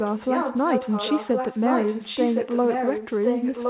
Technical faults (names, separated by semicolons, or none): echo leak